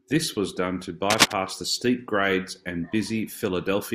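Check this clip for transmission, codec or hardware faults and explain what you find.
One hardware fault is present: cable scratch noise from 1.10 to 1.33 s, between "was done to" and "the steep grades and". Scratchy rustling rises a few decibels above the speech, likely from a worn cable or connector being moved, its contact resistance jumping rapidly. A spectrogram shows dense, ragged broadband streaks, and the waveform shows irregular spiky clusters.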